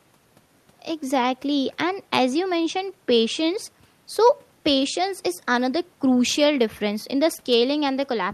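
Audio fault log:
No faults in this clip.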